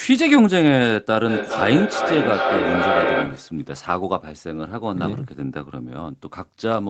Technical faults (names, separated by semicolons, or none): feedback echo between two devices